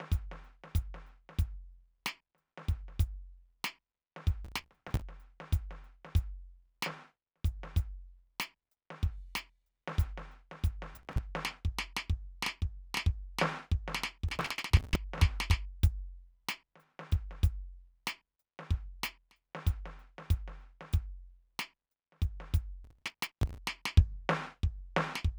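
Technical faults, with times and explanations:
4.45–5.02 s, 10.95–11.18 s, 14.29–14.96 s, 22.85–23.58 s: processor overload crackle. Dozens of roughly 5 ms buffers in a row are skipped, leaving hard-edged gaps heard as gritty tearing over the music.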